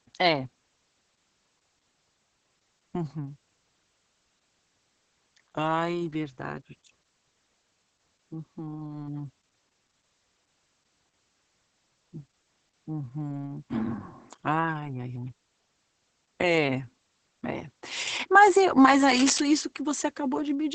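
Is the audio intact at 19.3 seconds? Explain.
No. At 19.3 s the audio is damaged by two faults.

From 19.09 to 19.40 s, just after "e mas", there is cable scratch noise: dense, irregular bursts of crackling and rustling laid over the speech, only a few dB below it. This kind of noise comes from contact resistance fluctuating rapidly, most likely because a worn cable, connector or control was moved during recording. The scratching lasts about 0.3 s and then stops.

Underneath this, and across the whole clip, is heavy Opus voice compression. The sound points to the SILK linear-prediction coder running at a bitrate around 10 kbps. The band is wideband, with nothing above about 8.7 kHz, and the excitation is coded coarsely. As a result the speech at this point sounds muffled, hoarse and slightly robotic.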